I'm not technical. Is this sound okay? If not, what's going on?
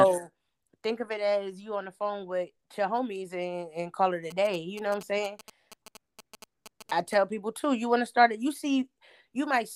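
No. From 4.30 to 7.14 s, after "and call it a" and until "people too you want", there's a galloping ticking buzz from GSM signalling bursts: a nearby 2G phone's radio pulses picked up by the audio gear.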